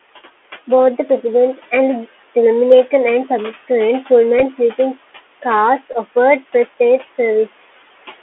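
The whole clip runs through the Bluetooth CVSD headset codec, and it shows. Everything sits inside a telephone band of roughly 300 Hz to 3.4 kHz, so the speech has no air at the top. On top of that the one-bit delta coding is plainly audible: louder, brighter moments can't be tracked fast enough and go rough, s sounds come out scratchy, and there's a grainy hiss riding underneath the talking, which fits the 64 kbps headset link.

Also throughout, you can hear noise suppressor artifacts. The room noise, which sits about 19 dB under the speech, gets pulled down by about 15 dB in the gaps and then comes back up whenever someone talks, so the background pumps with the speech.

At 4.39 to 4.43 s, just before "sleeping cars", there's a Bluetooth headset packet repeated glitch. Packets dropped between headset and phone, and the chip replayed the previous packet's data in their place. About 26 ms of audio went missing, scattered across that stretch, with the longest run about 10 ms. 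Back-to-back repeats at that 3.75 ms spacing give a brief buzz around 267 Hz, which is what you hear here.

It happens again at 5.93 to 5.95 s, right after "sleeping cars". This time about 11 ms is lost, so it's a shorter, smaller burst of repeated packets before clean audio resumes.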